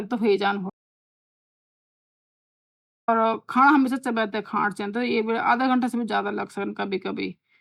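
A speech recording with an audio dropout to silence: just after "तोह वे ज्यांदु", the sound cuts off abruptly from 0.70 s to 3.08 s, about 2.38 s lost. Unlike a natural pause or gating, no room tone survives, which points to a likely input disconnection or mute.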